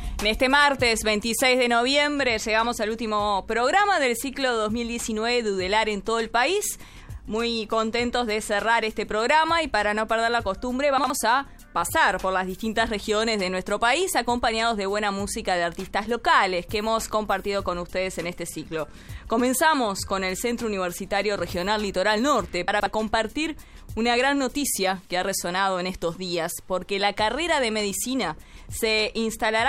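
Chunks out of order at 10.98 to 11.1 s and again at 22.68 to 22.86 s. In each case a 60 ms block of audio was delivered late and played after material that should have followed it. The first block arrives one chunk late, the second two chunks late. No audio is missing, but the rearranged blocks meet at three abrupt joins, heard as a brief scrambled moment.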